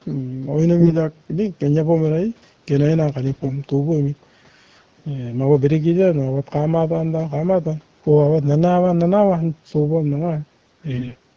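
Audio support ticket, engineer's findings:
AMR bit errors at 0.80–0.96 s, 3.32–3.52 s and 10.92–11.16 s. A weak link flips the less protected bits of AMR-WB frames, at a rate of roughly 10 to 15 percent. The checksum on the important bits still passes, so the corrupted frames get decoded anyway. Pulse positions land wrong, and the fine pitch, gain and spectrum values are off. Pitch and level roughly hold, but the speech turns hoarse, scratchy and gargly in those bursts. The top cutoff near 8 kHz and the light codec colouring fit normal call processing and HD Voice at about 12.65 kbit/s.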